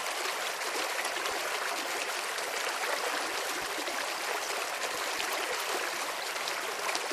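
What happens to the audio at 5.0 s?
At 5.0 s the sound is inside a stretch of DAB burbling running from 4.93 to 5.52 s. Bit errors at a rate of roughly 0.2 percent have slipped past error correction into the audio data, corrupting samples and scale factors. Individual sub-bands jump in level frame by frame, which points to a couple of dozen damaged frames, producing short blips of noise in single sub-bands over the sound.

Underneath, across the whole clip, is MP2 compression. The dull, granular, gurgling quality likely comes from MPEG Layer II coding at about 80 kbps, where too few bits force upper sub-bands to drop out and leave the remaining bands coarsely quantised.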